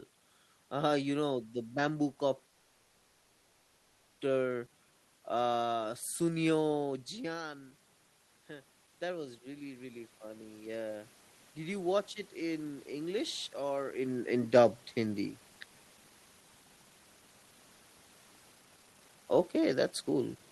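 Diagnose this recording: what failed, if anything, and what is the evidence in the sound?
At the network and jitter-buffer stage, packet delivery most likely stalled and the receiver's buffer ran dry. From 2.49 s to 4.20 s the speech stops and the last sound is drawn out as a fading buzz or hiss, filling about 1.69 s. When the audio resumes, it continues exactly where it left off with nothing lost. The pause was inserted into the stream, so everything after it plays about 1.69 s later than before.

Right after that, the jitter buffer was still rebuilding its reserve, so it slowed playback. Between 4.73 s and 4.92 s, the receiver repeated single pitch periods and pause fragments over and over, adding 37 ms. That section plays at 85% speed with the pitch unchanged, so sounds are stretched and slightly drawn out, and there may be a faint warble.

In call processing, the automatic gain control reacted to the level drop from the talker moving away around 7 s. 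The input fell by about 12 dB, and the AGC raised its gain by about 6 dB between 8.47 s and 11.87 s. Over those three and a half seconds, the speech and the room noise behind it swell together, which shows the gain is changing rather than the talker.

Later, the jitter buffer held more audio than its target, so it cut short segments of one or a few pitch periods to reduce delay. From 12.20 s to 17.22 s, it removed roughly 0.4 s, and speech runs at 108% speed at normal pitch. From 18.52 s to 20.51 s, it removed about a second, and speech runs at 148%. That final stretch sounds clearly rushed.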